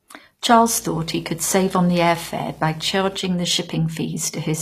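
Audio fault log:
throughout, HE-AAC compression: treble above 14.9 kHz is absent and what remains sounds gritty and lispy, likely rebuilt by band replication at a low bitrate near 24 kbps, not simply filtered off.
0.50 to 3.18 s, video or display buzz: a 60 Hz field-rate buzz with hash above it, roughly 25 dB under the speech. The rasping hash separates it from smooth mains hum.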